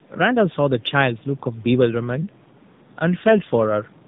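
Tandem speech coding runs through the whole clip. The speech was decoded and coded again twice by narrowband coders, with a G.711 mu-law link between. Each pass roughened the last. It sounds muffled and warbly, with nothing above 3.7 kHz, and the quiet room noise sits about 30 dB below.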